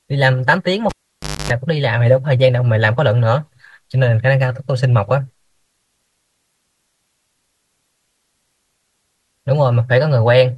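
At 0.89 s a live cable is pulled and plugged in. The broken connection gives a pop, then 0.56 s of near silence. As only the tip touches, 0.25 s of 50 Hz mains buzz leaks in, and a second pop brings the sound back at 1.50 s.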